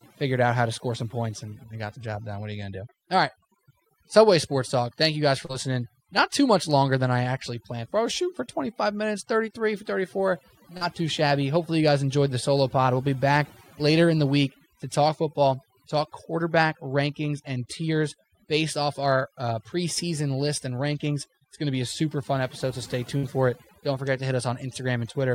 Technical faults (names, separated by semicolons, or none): overdone noise removal; short concealed packet loss; burst of packet loss